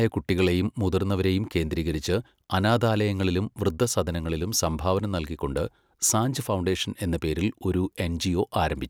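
No technical faults are audible.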